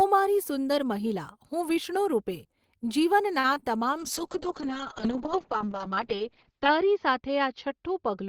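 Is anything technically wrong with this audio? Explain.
Yes, there are three kinds of transmission fault, all after the 3 s mark.

Short stall from a late packet, 3.39 to 3.46 s: the jitter buffer ran dry, so the receiver held the last sound for about 46 ms, then resumed where it left off.

Short concealed packet loss, 3.54 to 3.58 s and 3.60 to 3.64 s: about 20 ms went missing each time, and the decoder extrapolated the preceding sound, giving brief smears.

Call bitrate drop, 3.98 s to the end: the audio turns rough and muffled, with bandwidth falling from 20 kHz to 8 kHz. This is consistent with the encoder dropping from about 32 to 7 kbps.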